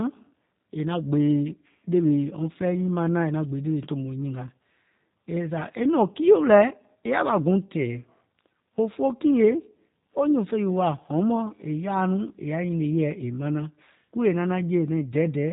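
From start to finish, the speech has passed through a G.729 codec at what sounds like its 8 kbit/s rate, rebuilt from a vocal tract model and sparse pulses. Nothing above 4 kHz survives, and the voice comes across plainly rough and synthetic.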